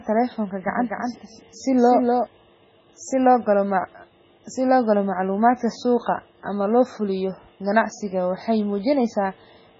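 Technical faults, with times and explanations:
Throughout: MP3 compression. The speech has a watery, swirling quality, with metallic chirps on s sounds and blurred consonant onsets, which likely comes from heavy MP3 encoding at a very low bitrate, around 16 kbps. Starved of bits, the encoder removes everything above 7.7 kHz and drops weak frequency lines that flicker in and out between frames. A spectrogram shows a hard ceiling at 7.7 kHz and patchy, speckled gaps below it.
0.68 to 2.26 s: doubled audio track. A second full-band copy of the speech trails the original by around 300 ms at about 5 dB lower, so every syllable is followed by a distinct, dry repeat with no decay or room tone. This is likely a second capture through a slower path mixed into the first. The echo begins and ends abruptly. On the waveform each burst appears twice, and the spectrogram shows slightly weaker duplicated patterns offset in time.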